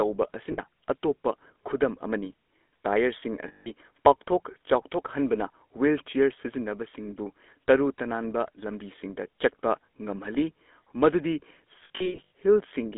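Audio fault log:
throughout: GSM full-rate codec. The speech has a plainly buzzy, gravelly roughness, which fits a 13 kbps GSM full-rate coder. It rebuilds the voice from a vocal-tract model driven by sparse pulses. The band runs only from 250 Hz to 3.6 kHz.
0.52–0.60 s, 3.48–3.71 s, 11.84–12.30 s: lost GSM frames. About 60 ms, 180 ms and 320 ms of sound are lost. The decoder repeats the last good frame, so the sound hangs as a rough metallic ring. The last loss comes in short scattered bursts.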